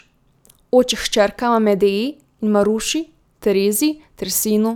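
Nothing in the speech stood out as a technical problem on listening.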